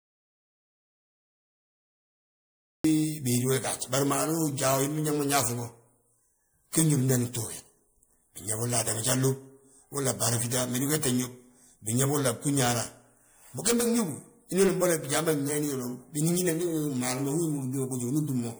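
Audio dropout to silence runs from the start to 2.84 s: silence with no room tone, the speech entering mid-flow, likely from lost input while recording continued. Generation loss runs throughout: swirly, hollow, smeared speech with blurred attacks, likely from several rounds of MP3 re-encoding, consistent with a 96 kbit/s chain.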